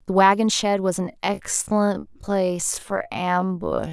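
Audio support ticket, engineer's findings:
Time-stretched section, 1.0 s to end of clip. Speech abruptly drops to half pace, pitch unchanged; drags. Likely software time-stretch to fit a length, repeating short pieces to double duration while preserving pitch.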